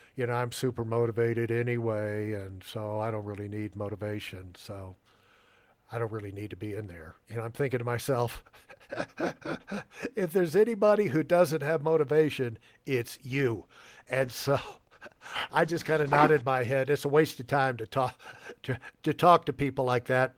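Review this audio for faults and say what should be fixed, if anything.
A call bitrate drop runs from 13.28 s to 16.67 s, starting just after "doesn't have motivation it's". The bandwidth estimate fell, so the encoder was told to spend far fewer bits and coded the speech more coarsely for about 3.3 s. The degradation fits a drop from roughly 32 kbps to around 17 kbps before the rate recovers. To prevent it, stabilise the network path and set a higher minimum encoder bitrate so short estimate dips don't starve the codec.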